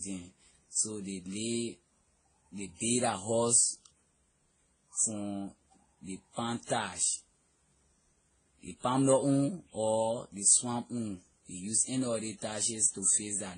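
Transcoding between lossy codecs runs throughout the speech. Nothing sits above 9.7 kHz, and mixed artefacts are heard together. This likely comes from successive low-bitrate encodes, roughly around 30 kbit/s each, every pass adding its own damage while keeping the lowest cut-off.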